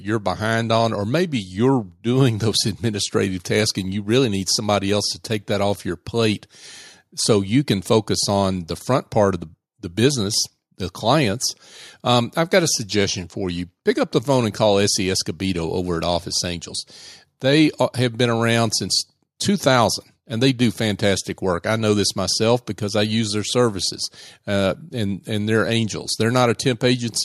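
No technical faults can be heard anywhere in the recording. There is nothing to locate or explain on its timeline.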